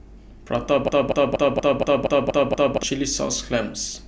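From 0.88 s to 2.83 s the speech turns into a broken-record loop: a fragment of about 0.24 s plays eight times back to back, identical each pass, so the flow stutters mechanically and whatever should have followed is simply gone. Something upstream in the player, encoder or stream likely stalled and kept resending its last buffer. On a waveform and spectrogram the stretch shows as a tile of exact copies repeating every 237 ms.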